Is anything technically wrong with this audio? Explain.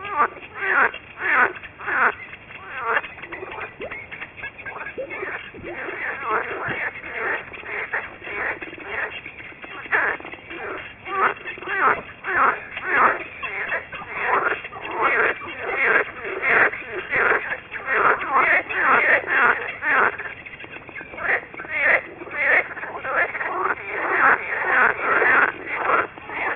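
Yes. Aliasing runs through the whole clip. Content above 3 kHz folds back below that edge, which fits a drop to about a 6 kHz rate with no anti-alias filter, so gritty, metallic false tones sit only roughly 10 dB under the sound.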